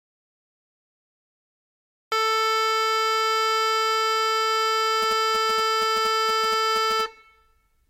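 The music is already in an audio dropout to silence when the clip begins, most likely because the input was lost and the recorder kept writing silence. The first 2.12 s are silent with no room tone, and then the music breaks in mid-flow.

From 5.02 s to 7.01 s, GSM signalling bursts from a nearby 2G phone are picked up and rectified by the audio circuit. They form a galloping dit-dit-dit of short buzzes at 217 Hz, sitting around 15 dB below the music.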